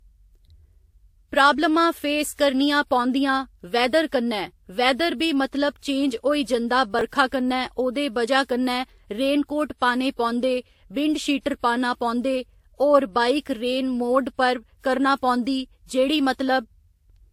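Transcoding between lossy codecs affects the whole speech recording: nothing is present above 16.5 kHz, and two different kinds of coding artefact sit on top of each other. The likely cause is a WMA encode at around 96 kbit/s re-encoded as Vorbis at around 44 kbit/s, each stage adding its own damage. Chunks out of order appear between 6.99 and 7.01 s: a short slice of about 5.3 ms plays late, pointing to a displacement of roughly three chunks, so the sound jumbles briefly across the hard joins.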